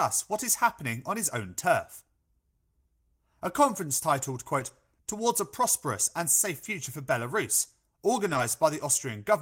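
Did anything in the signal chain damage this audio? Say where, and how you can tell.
Yes, at the network stage: lost packets rebuilt from error correction at 4.59 to 4.69 s, 6.63 to 6.65 s and 8.29 to 8.39 s. The speech never drops out, but those stretches turn briefly rougher and noisier, which fits roughly 60, 20 and 60 ms of rebuilt audio. Each lost packet was replaced by the low-bitrate copy carried in the next packet. That sets it apart from plain loss concealment, which fills the gap with a smeared, fading guess.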